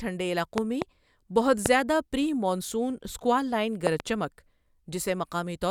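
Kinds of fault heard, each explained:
Loud pop: sharp pulses, likely voltage glitches, jump about 20 dB over the speech, showing as tall waveform spikes and thin full-height spectrogram lines.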